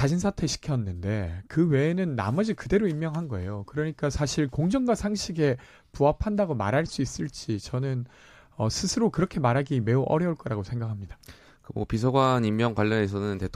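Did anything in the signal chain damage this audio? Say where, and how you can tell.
No, nothing along the chain from capture to playback has left any audible mark on this speech, so there's really nothing here to chase down.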